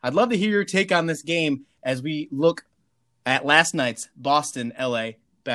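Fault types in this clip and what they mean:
Nothing here to flag; the recording runs along without any audible technical trouble.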